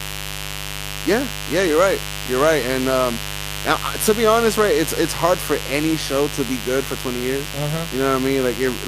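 From start to finish, the speech sits on a mains buzz locked to 50 Hz and fairly loud, not far below the voice. Sharp switching spikes twice per cycle spread harmonics into the kilohertz range, so it rasps rather than giving a smooth, low hum.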